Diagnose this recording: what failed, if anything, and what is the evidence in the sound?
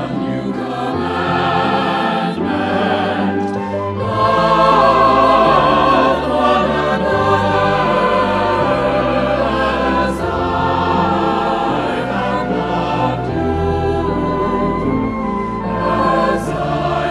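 Nothing failed here: I listened closely through the wiring, conversion, buffering and playback stages and found no glitch, dropout or distortion that any of them would leave behind.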